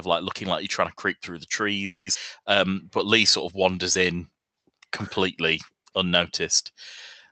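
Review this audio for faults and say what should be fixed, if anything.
A call audio freeze runs from 1.85 to 2.08 s, 210 ms where the receiver likely ran dry and stretched the last sound out before resuming with nothing lost. Right after, at 2.14 to 2.17 s, there's a skip ahead: roughly 150 ms of audio drops out and the two sides butt together almost seamlessly, pulling the delay back down. Then come two jitter buffer slow-downs, 2.42 to 3.08 s at 93% speed and 3.56 to 4.39 s at 92%, where repeated pitch periods draw the sound out at the same pitch. The call-path coding noise and the high-frequency cutoff near 8 kHz are present underneath. To prevent this, stabilise the network path and give the jitter buffer a steadier, slightly larger target delay so it doesn't swing empty and full.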